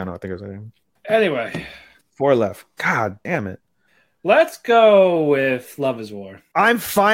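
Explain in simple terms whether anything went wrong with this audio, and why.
Listening to the recording, nothing went wrong that I could hear in the speech at any point.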